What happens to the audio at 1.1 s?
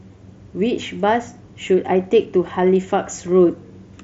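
Nothing goes wrong at 1.1 s: the speech there comes through intact, carried normally by the Bluetooth mSBC headset codec.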